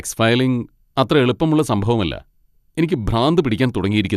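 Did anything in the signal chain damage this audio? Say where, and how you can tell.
No, nothing in the signal chain damaged this audio.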